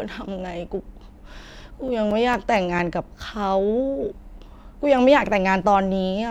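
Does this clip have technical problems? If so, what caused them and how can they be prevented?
Yes, CD scratch ticks: eight short clicks in the speech between 1.43 and 3.02 s, once per disc turn, where a scratch defeated error correction. Clean or resurface the disc, or rip with secure re-reads.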